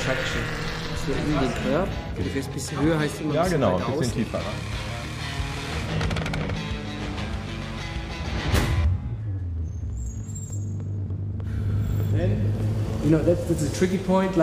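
A drift correction step occurs from 4.41 to 6.57 s and again from 9.22 to 9.98 s. Playback slows by 5.73%, dropping pitch about a semitone (102 cents) before snapping back, likely clock-matching software abruptly changing rate to rebalance its buffer.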